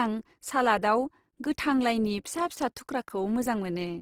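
Throughout, the speech sounds plainly grainy and rough, with noisy band texture reaching 20.2 kHz, likely Opus compression in CELT mode, pointing to roughly 16 kbps.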